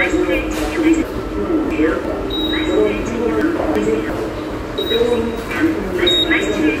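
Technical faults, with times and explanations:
1.02–2.05 s and 3.41–4.10 s, chunks out of order: blocks of about 0.34 s were delivered late and played after later blocks, two chunks late in the first span and one in the second. Nothing is missing, but the sound jumps back and forth.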